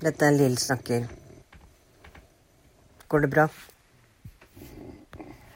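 AAC frame loss with concealment at 0.64–0.70 s and 5.02–5.05 s: about 43 ms and 21 ms of speech rebuilt from the preceding spectrum, heard as brief smeared, noisy patches.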